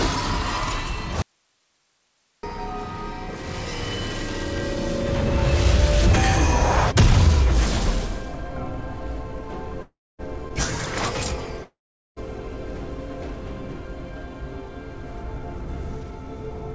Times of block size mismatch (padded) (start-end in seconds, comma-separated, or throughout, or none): none